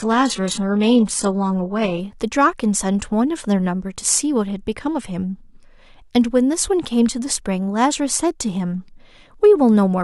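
From 0 to 2.0 s the speech has stronger codec artefacts, with nothing above 11.1 kHz. That's an adaptive stream starting at a low bitrate, then stepping up without a gap.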